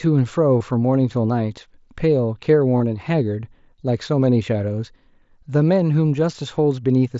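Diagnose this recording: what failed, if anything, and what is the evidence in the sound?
Bluetooth link: concealed Bluetooth headset packet loss gives buzzy blips at 0.59 s and 2.78 to 2.80 s, as the receiver repeats recent waveform over 15 and 22.5 ms gaps.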